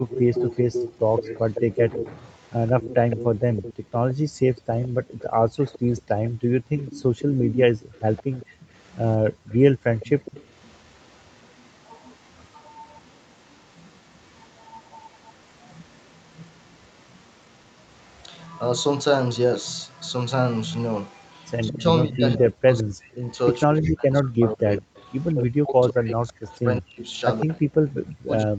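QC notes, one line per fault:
0.08–18.48 s and 21.11–27.92 s, echo leak: a copy of the speech trails 162 ms behind, about 10 dB down, then about 15 dB down, likely loudspeaker pickup the echo canceller left in.
0.3–2.1 s, 8.49–9.43 s and 21.68 s to the end, speech suppressed in double talk: the talker dips in pieces, roughly 15 dB at first and then as much as 40 dB, likely because the canceller turned everything down while both sides spoke.
3.36–7.93 s and 9.72–9.91 s, background gated by the echo canceller: room sound drops out by about 37 to 38 dB, for around two seconds in all and then a fifth of a second, as the canceller clamps the microphone while the loudspeaker plays.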